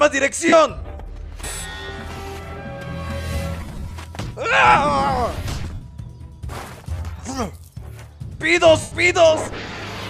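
Lost LE Audio frames at 0.48, 3.61, 5.74 and 8.81 s: the LC3 decoder fills each gap by replaying the last spectrum with random signs, smearing the sound into noise for 37.5, 75 and 105 ms, and, at 3.61 s, 180 ms scattered over 0.3 s in runs of up to roughly 40 ms.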